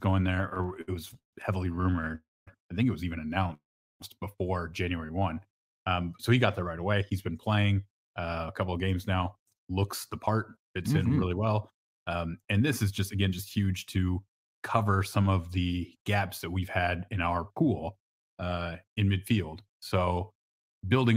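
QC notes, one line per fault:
0.49–2.11 s, repeated stalls (stutter): the speech keeps catching and restarting, 22 short holds in about 1.6 s, the longest about 142 ms, together filling roughly a quarter of that span. Late packets kept draining the jitter buffer, and each hold extends the last sound rather than dropping any. Unlike a single freeze, the delays are brief and clustered, so the sound drags unevenly instead of stopping once.
2.15–2.49 s, call audio freeze: the last sound is stretched as a fading buzz, then about 240 ms of silence before the speech picks up where it left off. This is likely packets held up in transit emptying the buffer, inserting about 314 ms of gap. Nothing is lost, which sets it apart from a dropout.
3.54–4.02 s, call audio freeze: right after "think it was even" the sound hangs and fades, with about 400 ms of silence, then resumes exactly where it stopped, about 461 ms late. 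A single long stall, not a stutter, with nothing missing from the speech.
5.07–5.47 s, jitter buffer slow-down: the speech runs at about 86% speed while the pitch stays the same, drawing sounds out by about 68 ms. The receiver repeated single pitch periods to rebuild its reserve. Nothing stops or goes silent, which is how it differs from a freeze.
6.92–14.77 s and 17.89–18.59 s, jitter buffer speed-up: from "he got there right" to "some of the gaps", the speech is hurried at about 108% speed, losing roughly 0.7 s. From "we've had in our" to "in midfield", it runs at about 107%, losing around 50 ms. Pitch stays put because whole pitch periods were cut to shrink an overfull buffer, unlike a sped-up recording, where the pitch would rise.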